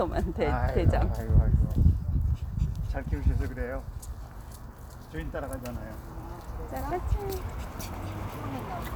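No technical faults are audible anywhere in this recording.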